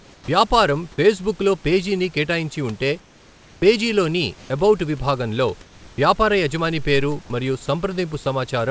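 From 0.0 to 0.28 s the pauses carry comfort noise in place of the background: a flat, featureless hiss about 5 dB quieter than the real room tone, likely generated by the receiver while the sender's discontinuous transmission had stopped. Unlike a dropout, the gap is filled, not silent. The same swap recurs at 3.0 to 3.62 s (about 2 dB quieter), 4.38 to 4.5 s (about 4 dB louder) and 5.62 to 5.98 s (about 3 dB quieter), each a step in level and texture.

At 0.21 s and again at 5.94 s the onset is clipped by the voice detector, cutting 70 ms and then 40 ms. Speech begins abruptly out of the comfort noise, without its soft attack, likely because the detector reacted late. Unlike a dropped sound, only the beginning is missing.

At 7.26 s a 40 ms stretch is sound dropped by the voice detector, likely because it mistook the sound for background. About 20 ms of speech gives way to comfort noise and then returns, rather than a clipped start. 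The G.722 call path's cutoff at 8 kHz is heard throughout.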